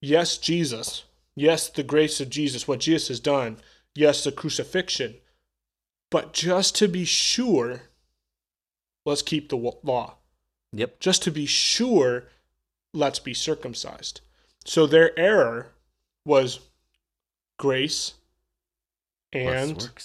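The speech recording has no audible technical faults anywhere in the signal.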